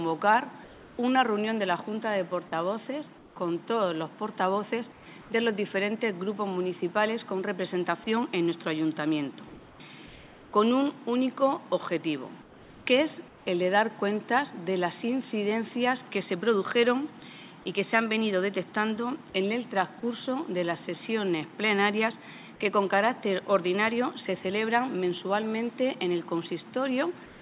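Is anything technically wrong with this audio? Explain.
Yes. Comfort noise replaces the background at 0.64–0.98, 3.18–3.36, 4.92–5.30, 9.48–9.80, 10.06–10.52, 12.42–12.86, 13.28–13.46 and 27.26 s to the end. In each quiet gap, sitting about 24 to 28 dB below the loud parts, the real background gives way to a steady, featureless hiss, usually about 2 to 4 dB quieter. This likely comes from discontinuous transmission, with the receiver synthesising noise while the sender stays silent. The band stops at 4 kHz, which fits a G.711 call path.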